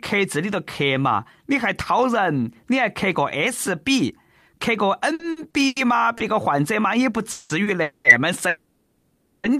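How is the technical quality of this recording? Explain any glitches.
The speech is marred by network timing faults in its second half, all packet delays. Nothing appears to be lost, but the audio stutters, holds and freezes.

From 5.13 to 5.78 s there are repeated stalls (stutter). Packets kept arriving late, and the jitter buffer ran dry four times in that span. Each time the receiver extended the last sound to cover the wait. About 230 ms was filled this way, roughly a third of the span. The longest gap is 90 ms. The speech drags and catches here rather than dropping out.

A short stall from a late packet occurs at 6.18 to 6.22 s and again at 7.64 to 7.69 s. In each, one packet missed its slot. The receiver stretched the preceding sound for 20 ms and then 30 ms until it arrived. Playback then resumed where it left off. Each stall sounds like a syllable held a touch too long, with a slight buzz or dip.

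Three call audio freezes follow, at 7.32 to 7.52 s, 7.83 to 8.07 s and 8.49 to 9.46 s. The held time grows from 180 ms to 220 ms, then to 950 ms. The sound hangs on the last moment, carried on as a buzz or hiss that fades. It never falls to silence. The likely cause is packets being held up in transit until the buffer emptied. Speech then picks up from the same point, so the gaps are inserted and nothing is skipped.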